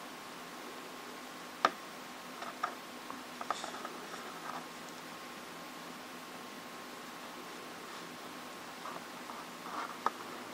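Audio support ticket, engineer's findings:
Nothing stood out on listening; no findings to raise against this audio.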